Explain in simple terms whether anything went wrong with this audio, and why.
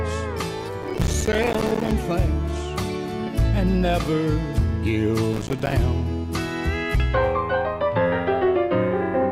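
Something did go wrong: there is processor overload crackle from 0.83 to 1.92 s and again from 5.33 to 5.73 s. The computer handling the sound fell behind, so dozens of tiny chunks, each around 5 ms long, missed their deadline and came out as silence. Those rapid, hard-edged gaps add up to a gritty crackle riding on the sound. Unlike a single dropout, it is a dense burst of many gaps that stops once the load eases.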